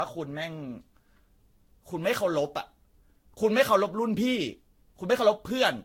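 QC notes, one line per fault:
Throughout, generation loss: the speech sounds swirly and hollow, with smeared consonant attacks and nothing above 16.6 kHz. The smearing goes beyond what one lossy pass would leave. The likely cause is the audio being decoded and re-encoded around seven times, which fits a Vorbis chain at about 61 kbit/s. Each pass quantised again on a shifted frame grid, so the noise and spectral holes stacked up.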